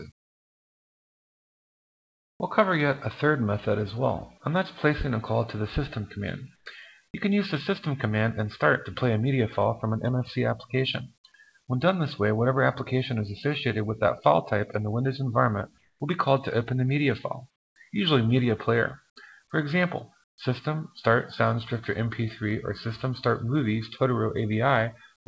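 In the pauses at 0.12 to 2.40 s, 6.56 to 6.66 s, 15.78 to 16.00 s, 17.56 to 17.76 s, 20.24 to 20.38 s and 25.16 to 25.26 s, the background gives way to a smoother, quieter noise, about 18, 4, 3, 20, 14 and 17 dB lower in turn. This is comfort noise in place of the background, likely from discontinuous transmission: the sender stops in silence and the receiver fills the gap with synthetic noise. Throughout, nothing sounds above 8 kHz, consistent with G.722 at 64 kbps.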